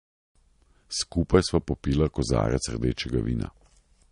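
From start to finish the speech carries plainly audible MP3 compression damage, likely from an encoder starved at a low bitrate around 40 kbps: nothing above 10.6 kHz, and a watery swirl where weak spectral lines flicker between frames. Simple low-pass filtering removes treble without this swirl.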